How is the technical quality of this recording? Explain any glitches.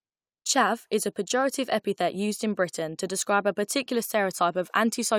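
Nothing in the recording stood out as a technical problem on listening, so there are no glitches to explain.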